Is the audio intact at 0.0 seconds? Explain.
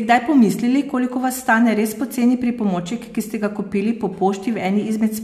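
Yes, the speech is intact at 0.0 seconds, with no fault of any kind at that moment.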